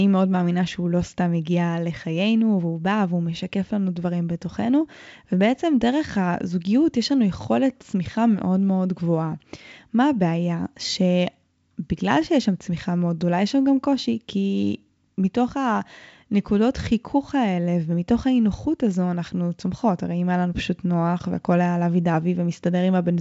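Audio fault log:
Nothing stood out on listening to this speech over G.722 wideband telephone coding at 64 kbit/s.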